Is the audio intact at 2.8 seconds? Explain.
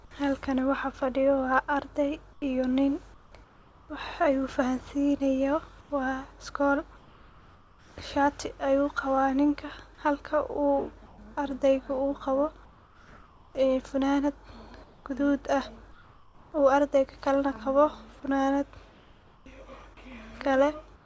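No, 2.8 s falls inside a stretch of comfort noise in place of the background, from 2.33 to 3.89 s. The real room tone drops out and a flat, featureless hiss fills the gap. Likely the sender paused transmission on detecting silence, and the receiver synthesized noise instead.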